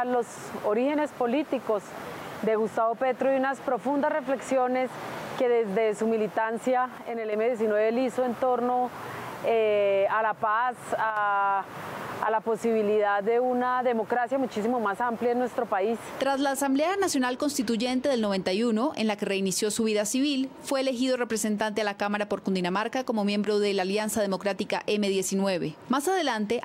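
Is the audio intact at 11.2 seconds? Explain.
No. At 11.10 to 11.17 s, just before 11.2 s, the level suddenly falls by about 6 dB for roughly 64 ms, then returns. That points to one channel dropping out. The likely cause is a stereo channel briefly losing signal, so the mono sum drops.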